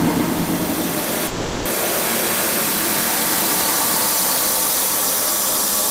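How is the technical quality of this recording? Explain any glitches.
The recording has one glitch, a call audio freeze. From 1.27 to 1.67 s the sound stalls into a fading buzz for 380 ms, then resumes intact, likely from delayed packets draining the jitter buffer.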